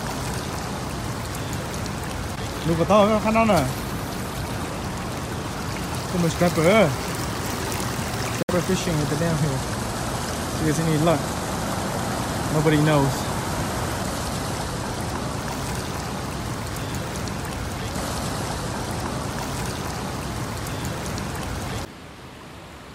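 At 8.43 s the audio cuts out and stays silent until 8.51 s, a gap of roughly 80 ms, then resumes as though it had kept playing underneath, with no catch-up or pause in timing. This is likely a Bluetooth dropout, where packets failed to reach the headphones in time and were discarded, so the output had nothing to play. The length of the hole fits about 64 ms of lost audio data.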